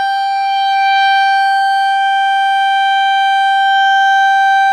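A loudspeaker-to-microphone loop likely sat just at the edge of feedback, sustaining a feedback whistle at 4.5 kHz in this music clip from 0.0 to 2.04 s: a thin, steady tone, about 25 dB below the music, swelling and fading slowly in level without building up.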